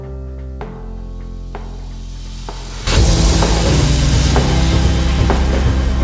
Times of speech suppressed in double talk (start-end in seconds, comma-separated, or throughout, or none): none